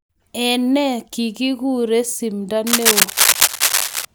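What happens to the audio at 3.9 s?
At 3.9 s the speech is overlaid with dense, uneven scratching and rustling, somewhat louder than the speech itself, running from 2.66 to 4.05 s. This is cable scratch noise, likely from a worn cable or connector being moved so its contact resistance fluctuates rapidly.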